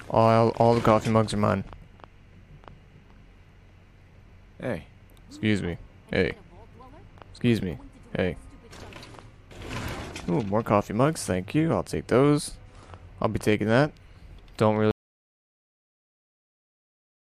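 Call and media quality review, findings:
Audio dropout to silence from 14.91 s through end of clip. Sound cuts off mid-flow into dead silence, no room tone, never returns. Likely input loss (device disconnect, failed link or mute) while recorder kept writing silence.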